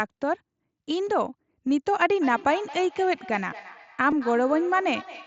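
At 1.07 s a concealed Bluetooth headset packet loss fills a 7.5 ms gap, which fits one lost mSBC frame, by repeating the closest-matching recent waveform. The patch is almost inaudible against the wideband headset audio.

From 2.21 s to the end, feedback echo between two devices sets in. A second device's playback leaks into the microphone and returns about every fifth of a second, peaking at about 16 dB below the speech and sounding thin and ringy.

At 4.11 s a second concealed packet loss covers 15 ms, which points to two consecutive dropped frames. The repeated waveform gives a very brief buzzy tone with a slight warble as real audio resumes.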